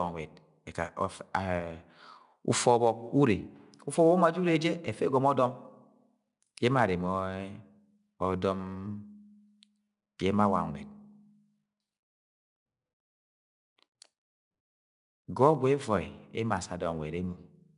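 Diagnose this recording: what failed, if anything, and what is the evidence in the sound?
A gritty hiss rides on every louder stretch of the speech from start to finish, and nothing is heard above 10.6 kHz. This is 4-bit ADPCM compression at the codec stage, which fits a bitrate near 89 kbps. Each sample is coded as a coarse step from a prediction, so the noise scales with the level.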